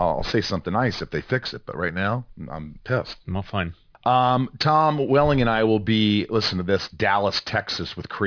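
Throughout, the speech has gritty, metallic sibilants and a spectrum packed hard up to about 5.5 kHz. This is aliasing: high frequencies folded back, consistent with unfiltered downsampling to 11 kHz.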